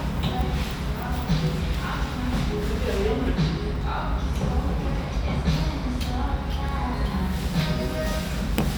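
A recording of sounds with one bit error spike at 6.69 s. It is a single sharp tick, two samples long, reaching about -24 dBFS. A flipped bit in memory or on a digital link shifted the values by a power of two. They returned at once, giving a broadband click unrelated to the sound.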